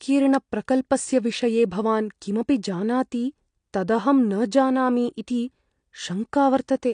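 Speech, with AAC compression damage running from start to finish. Nothing sounds above about 9.8 kHz, so the top end is dull. Sibilants fizz and sustained sounds warble and smear. The damage is plainly audible, likely from AAC-LC at a low bitrate, consistent with roughly 32 kbps.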